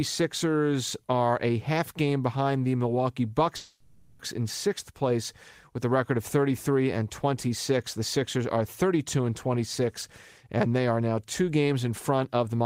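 A long network dropout, likely the cause at 3.56 to 4.20 s, leaves the speech as a smeared, fading buzz for about 0.63 s, then resumes with that stretch missing.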